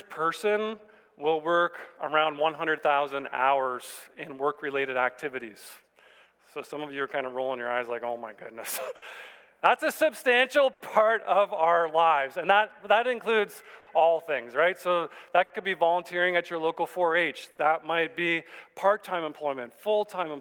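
Clock drift between sender and receiver runs through the whole clip. The sender's audio clock is slow, by roughly 5 percent. The receiver's jitter buffer keeps draining as a result. It has to make up the shortfall as it goes. The effect is a faint, persistent unsteadiness in timing rather than one clear event.

Repeated timing corrections begin at 0.61 s and continue to 20.33 s. The receiver keeps stretching the audio by repeating short pieces, so the playback runs at about 97 percent speed. All the edits go the same way, and they are unevenly spaced. Together they add roughly 0.7 s. Each one is small. They come across as slight hiccups and a tempo that drags and wavers.

Short stalls from a late packet occur at 8.96 to 9.05 s, 10.73 to 10.83 s, 13.80 to 13.90 s, 15.44 to 15.53 s and 17.51 to 17.61 s. Each time a packet arrived late and the buffer ran empty. The receiver held the last sound for 60 to 70 ms until the packet turned up. 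It then resumed from the same place, so nothing is lost. Each stall sounds like a brief freeze, with a held tone and a slight buzz or dip.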